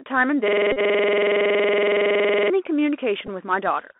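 Speech heard through a Bluetooth CVSD headset codec throughout: the band stops near 3.5 kHz, sibilants turn scratchy, and a granular hiss sits underneath, unlike the clean muffling of a plain low-pass. From 0.48 to 2.50 s a system hang loop repeats one 46.44 ms slice at 21.5 Hz, giving a machine-gun stutter rather than a buzz, which fits a 2048-sample buffer cycling while the system froze. A Bluetooth headset packet repeated run from 0.72 to 0.79 s produces a brief steady buzz near 267 Hz, much higher-pitched than the stutter. A shorter repeat run at 3.27 s gives an even briefer buzz near 267 Hz.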